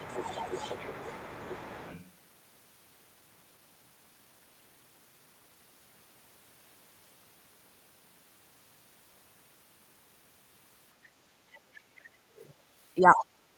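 Right from the start, 0 to 2.04 s, the other side's voice is leaking through underneath, sitting maybe 20 dB below the main talker. That's most likely the far end coming out of the talker's loudspeaker and getting past the echo canceller into the mic.

At 2.97 to 2.99 s there's a skip ahead: roughly 0.7 s of speech just isn't there, and playback jumps straight over it with no fill, so the two sides butt together abruptly.

Right after, 3.07 to 5.56 s, you get a jitter buffer speed-up. The buffer was holding too much, so it trimmed out short pitch-period chunks, about 300 ms in total, and the speech runs at roughly 113% speed, same pitch but noticeably hurried.

The leakage creeps back near the end: faint scraps at 11.53 to 11.58 s and 12.37 to 12.52 s, around 40 and 35 dB down, then a louder bit at 13.14 to 13.25 s, only about 15 dB under.

Overlapping that, 12.98 to 13.16 s, the speech is suppressed in double talk. 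The talker dips by up to about 10 dB for around 200 ms, likely because the echo canceller couldn't tell them apart from the far side and pulled both down.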